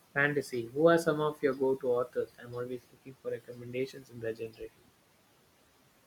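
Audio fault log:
Throughout: noise suppressor artifacts. The suppressor pulls the background down by about 18 dB between phrases, so the leftover noise pumps, sinking between words and rising under them.
0.43–0.76 s, 1.34–1.61 s, 2.08–4.9 s: speech cut by the noise suppressor. Quiet parts of the speech get mistaken for noise and ducked, by about 12, 14 and 19 dB at worst. The first two runs lose roughly 150 ms each and the long third one roughly one and a half seconds, so consonants and word endings sound swallowed. The room noise sits about 20 dB under the speech.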